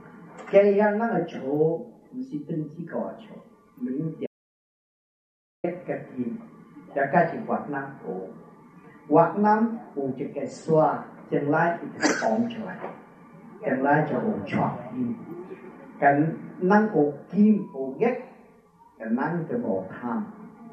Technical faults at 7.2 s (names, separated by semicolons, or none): none